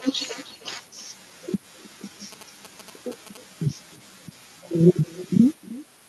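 Speech carries two faults. The far end plays the call on a loudspeaker that its microphone picks up, with no echo canceller, so every phrase returns about a third of a second later as a thinner copy about 23 dB down. A nearby 2G phone sends GSM signalling bursts that the audio circuit rectifies, adding a galloping dit-dit-dit of short buzzes at a 217 Hz rate, roughly 20 dB below the speech, from 2.32 to 3.37 s.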